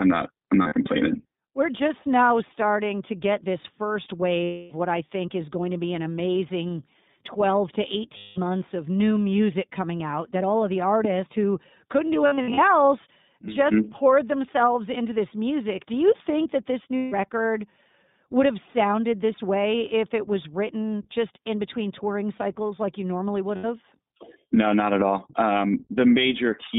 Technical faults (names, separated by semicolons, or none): iLBC codec; lost iLBC frames